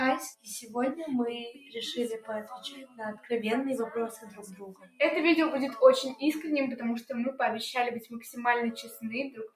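A noise suppressor applied to music or sounds runs throughout: a speech-oriented processor treats steady tones and decays as noise, so the level swings by around 10 dB as attacks pass and sustained parts sink, leaving a pumping, thinned sound.

Sound cut by the noise suppressor shows as deeper dips at 0.35–0.75 s (about 16 dB), 1.52–1.75 s (about 12 dB), 2.65–3.3 s (about 15 dB), 4.17–4.57 s (about 9 dB), 4.73–5.0 s (about 17 dB), 8.0–8.2 s (about 17 dB), 8.77–9.06 s (about 13 dB) and 9.3–9.55 s (about 18 dB), where held or fading sound is pulled down and tails are cut short.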